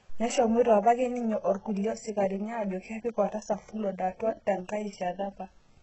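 Throughout the speech, s sounds come out gritty and lispy, and nothing reaches above 8 kHz. This is likely heavy HE-AAC compression, fitting a rate near 8 kbps. Unlike a plain low-pass, the treble is present but copied up from lower bands, so its harmonics misalign.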